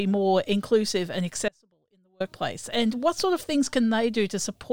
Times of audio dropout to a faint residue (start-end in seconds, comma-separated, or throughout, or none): 1.48-2.20